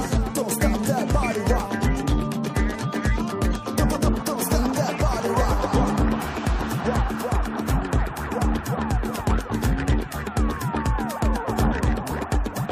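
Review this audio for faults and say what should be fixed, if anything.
No faults were found in this audio, so nothing needs to be fixed.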